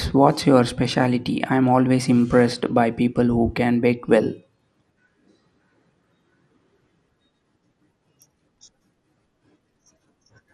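A speech recording with plainly audible coding damage from start to finish. The top end sounds dull and keeps dropping in and out. A gurgling, grainy roughness sits over the whole clip. The likely cause is MP2 compression at a starved bitrate, one that fits something near 80 kbps. With so few bits, the coder shuts off upper sub-bands and quantises the remaining ones coarsely. The result resembles low-rate digital radio.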